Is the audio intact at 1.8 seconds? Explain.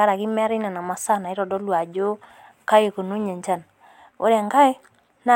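Yes, the speech plays through cleanly at 1.8 seconds, with no dropout, click, distortion or other fault at that point.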